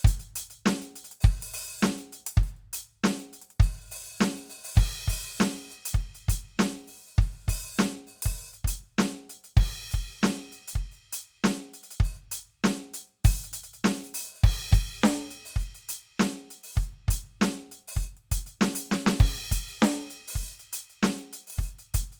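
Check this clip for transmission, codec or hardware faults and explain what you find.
No transmission, codec or hardware fault is audible anywhere in this music clip.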